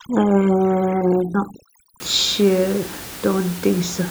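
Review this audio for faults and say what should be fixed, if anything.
Overdone noise removal, 0.0 to 2.0 s: the noise reducer cuts single frequency bands down or out whenever they sit near its noise estimate. The background drops and breaks up into twinkling specks, and quieter parts of the speech go too. To prevent it, lower the reduction strength so the room noise, about 16 dB below the speech, is only softened rather than removed.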